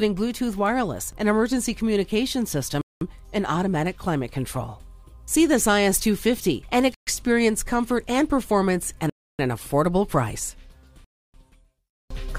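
The sound drops to dead silence four times: at 2.81 s for 200 ms, 6.94 s for 128 ms, 9.10 s for 294 ms and 11.04 s for 296 ms. These gaps are likely Bluetooth stalls, where delayed packets left the headphones' buffer empty until retransmissions arrived.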